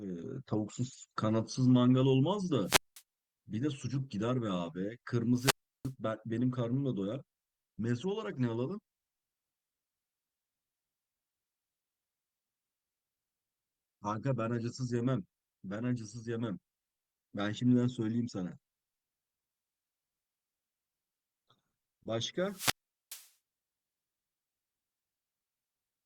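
Wireless microphone squelch dropouts at 2.64–3.02 s, 5.35–5.92 s and 22.43–23.31 s: the fading radio link raises broadband hiss, then the squelch mutes for about 200, 340 and 420 ms, leaving flat waveform gaps and blank spectrogram columns.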